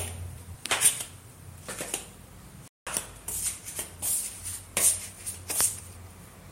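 A playback stall runs from 2.68 to 2.87 s, a gap of about 190 ms in which the output drops abruptly to silence in mid-flow before the sound returns. The likely cause is the player running short of data, or its audio thread being held up, so nothing was delivered to the output until it caught up. It is heard as a sudden, clean hole cut into the sound.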